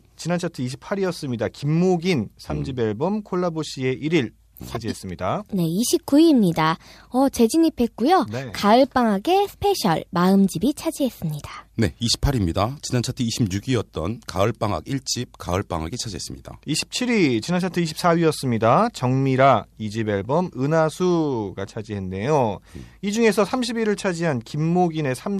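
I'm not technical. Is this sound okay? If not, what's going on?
Yes, there are no technical faults to hear in this speech recording. Nothing in it needs fixing.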